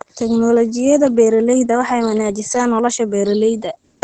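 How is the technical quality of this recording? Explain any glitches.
The quality is limited by plainly audible compression damage. Opus voice compression affects the whole clip. The SILK speech coder models the voice by linear prediction and codes its excitation coarsely, which fits a bitrate around 12 kbps. Nothing is heard above 8.8 kHz. The speech sounds muffled, hoarse and slightly robotic.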